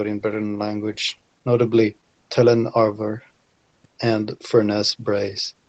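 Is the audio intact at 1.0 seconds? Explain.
Yes, at 1.0 seconds the speech plays through intact, with no dropout, glitch or other fault at that moment.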